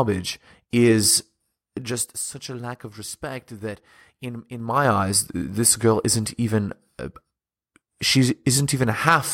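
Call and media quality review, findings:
Zipper noise, 1.77–2.2 s, just before "a lack of respect": ticking while level drops about 15 dB in 3 dB steps, about ten a second. Unsmoothed gain stage. Waveform shows staircase envelope; spectrogram shows faint vertical click lines at each step.

Zipper noise, 4.56–4.91 s, between "of respect that in" and "eyes this girl isn't": same ticking as level climbs back about 15 dB in 3 dB steps. Stepped gain ramp, no interpolation; staircase envelope, broadband click striations.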